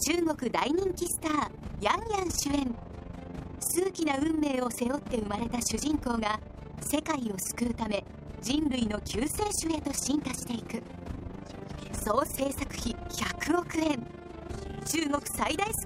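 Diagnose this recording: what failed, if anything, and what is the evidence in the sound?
The level pulses throughout the recording, dipping by about 11 dB around 30 times a second and giving the sound a fast, rough flutter. That points to overlap-add ripple in a frame-based processing stage: the audio was split into windowed frames and rejoined with an overlap that doesn't sum to constant gain, so each frame boundary leaves a dip. Dropouts or concealment glitches would come at irregular times, but this ripple is perfectly periodic and never stops.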